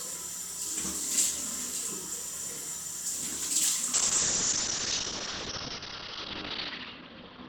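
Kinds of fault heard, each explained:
Call bitrate drop: From 3.94 s to the end, the encoder is starved of bits, consistent with a fall from about 128 kbps to roughly 6 kbps. The sound turns coarse and muffled, and on a spectrogram the band above 6 kHz goes empty.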